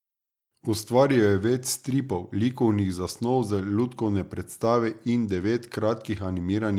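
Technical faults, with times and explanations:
No technical faults are audible anywhere in the audio.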